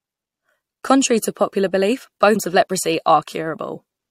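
Right after "to popular belief", at about 2.35 s, there's a quick glitch in the speech, and that's damaged data in a compressed stream. A patch of the encoded file got corrupted, so the decoder couldn't make sense of the frame there. It spat out garbage for a moment and then had to hunt for the next clean frame header to lock back on. It's very short, only around 16 ms, so it comes across as a tiny blip.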